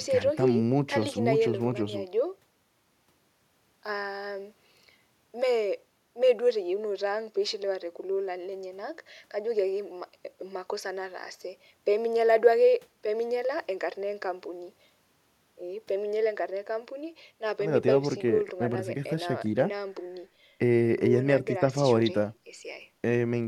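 No technical faults can be heard anywhere in the speech recording. Nothing in the audio needs a timestamp or a fix.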